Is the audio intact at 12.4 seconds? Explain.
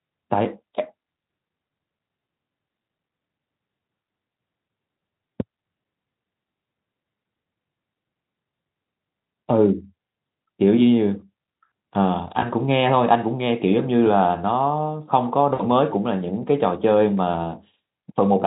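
No. From 12.39 to 12.50 s there is VoIP packet loss concealed by the speech codec. The gap points to a single lost 20 ms frame. The Speex decoder filled it by extrapolating from its last pitch and spectral envelope and lowering the gain, so the sound smears into a brief buzzy tone or coloured noise that fades. Because each decoded frame depends on the previous one, the weakened or distorted quality lingers past the gap before the stream recovers.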